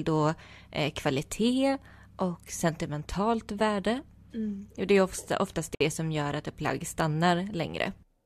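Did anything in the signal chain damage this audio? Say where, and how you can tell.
Yes. A brief burst of scratchy crackle at 5.46 to 5.54 s points to loose connector crackle in the analogue wiring, where a worn contact intermittently breaks the signal.

A 58 ms gap at 5.75 to 5.81 s, just before "det som gör att", is a gap at a join of encoded pieces. Separately encoded segments kept their codec delay and padding.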